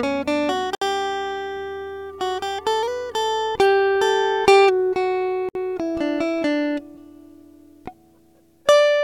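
Separately encoded pieces of this music were joined without trimming, so each encoder's start-up delay and last-frame padding survive as silence. The result is a gap at a join of encoded pieces at 0.75 s (65 ms) and again at 5.49 s (63 ms). Each is a sudden dropout in continuous music, its edges smeared by the codec, after which the music resumes exactly where it stopped.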